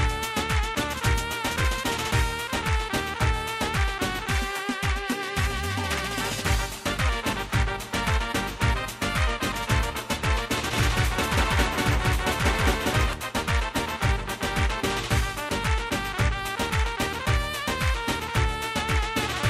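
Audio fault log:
10.73–13.13 s, doubled audio track: for about two and a half seconds the sound is heard twice, with a second full-band copy trailing the first by roughly a fifth of a second and at about the same level, so every onset is followed by a clean repeat. The copy carries no decay or room colour, and it cuts in and out abruptly at the ends of the span. This likely comes from a second, slower capture path or an edit that left two copies out of step.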